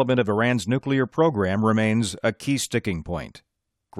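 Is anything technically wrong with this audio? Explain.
No, nothing technically wrong is audible in this clip.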